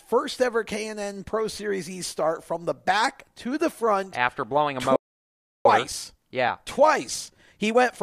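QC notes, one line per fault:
4.96–5.65 s, playback stall: the speech cuts off mid-flow for about 0.69 s of silence, likely from the player running out of data or its thread blocking.
5.65–8.03 s, time-compressed catch-up: the player trims its backlog by cutting and cross-fading small slices, so speech runs 1.15 times faster at unchanged pitch.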